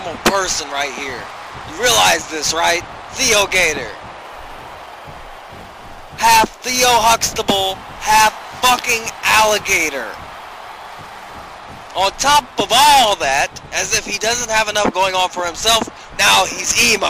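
From 4.22 s to 11.44 s a fine hiss and grainy roughness rides on the audio, swelling with louder and brighter passages and dropping away in quiet moments. This is sample clock jitter: a timing wobble on the order of ten microseconds puts the noise roughly 20 dB below the signal.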